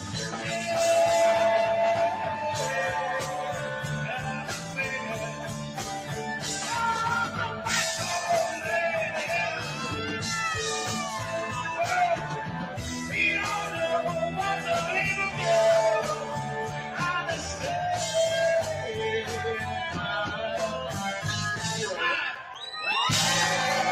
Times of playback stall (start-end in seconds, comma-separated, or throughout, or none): none